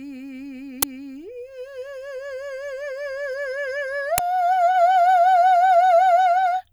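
Music with two uninitialised buffer bursts, at 0.82 s and 4.18 s: loud 12 ms blasts of digital noise where leftover memory got played, which fits a 512-sample buffer.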